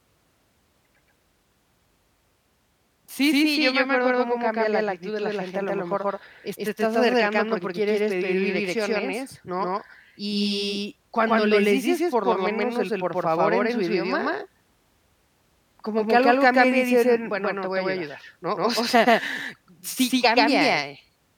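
From start to finish the speech carries a doubled audio track: a second, full-band copy trails the original by around 150 ms and sits at roughly the same level, so every syllable gets a dry, flat echo with no decay or room colour to it. It sounds like two takes stacked slightly out of step. The likely cause is the same signal being picked up a second time through a slower path, or an edit holding two offset copies.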